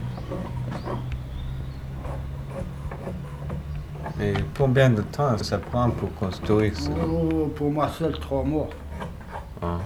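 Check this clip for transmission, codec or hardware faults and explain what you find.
Three short skips, all the same kind of fault: audio missing between chunks, at 1.61, 5.41 and 9.21 s. Each likely comes from 2-second chunks losing about a tenth of a second at the handover, so the sound jumps forward abruptly.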